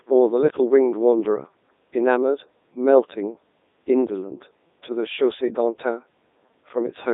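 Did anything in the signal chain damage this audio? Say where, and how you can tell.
Yes, at the codec stage. Across the whole clip the speech is buzzy and robotic, band-limited to roughly 250 Hz to 3.7 kHz with nothing above 3.8 kHz. That's classic Codec 2 vocoder damage: it sends only pitch, voicing and envelope, then rebuilds the voice from sine waves. The heaviness fits its 3.2 kbit/s mode.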